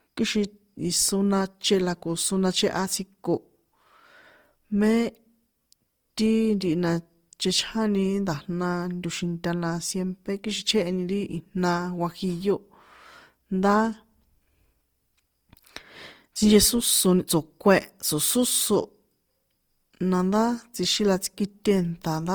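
Throughout the speech, the sound is rough and grainy, with a noisy sheen over tones, which points to Opus compression, likely in its music mode at a rate that fits around 24 kbps. Missing band energy is filled in, not left empty, so it lacks MP3-style swirl, and the band still reaches 20.2 kHz.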